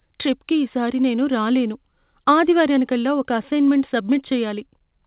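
No technical faults can be heard in the speech. The call path leaves nothing above about 4 kHz, the narrow telephone-band sound of a codec such as G.711 mu-law at 64 kbps.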